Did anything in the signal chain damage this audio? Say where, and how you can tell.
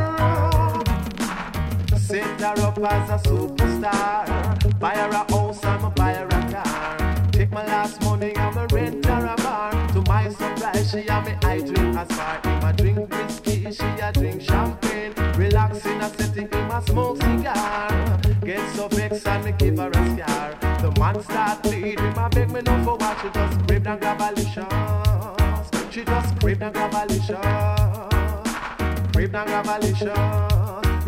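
Yes. At the codec stage, a Bluetooth SBC bit pool drop runs from 3.81 s to 6.60 s. The treble dulls and a gritty, granular noise rises, then clarity returns, which fits the bit pool falling from about 31 to 15, roughly 105 kbps. Starved of bits, the top sub-bands get few or no bits and the rest are coarsely quantised. A plain low-pass would dull without grit, and link dropouts would leave gaps; here the sound keeps flowing throughout.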